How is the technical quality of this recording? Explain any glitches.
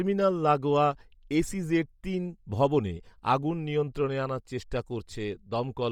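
The recording has heavy codec damage throughout. For the whole clip the speech sounds breathy and grainy, which fits a 32 kbps, 10 ms-frame stream and is likely Bluetooth LC3 compression. The upper spectrum is replaced by noise fill, which shows on a spectrogram as speckled, structureless texture above the harmonics.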